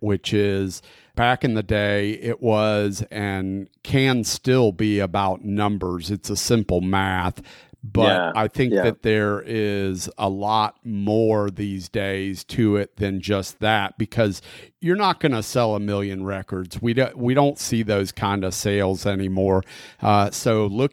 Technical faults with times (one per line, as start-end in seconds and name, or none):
none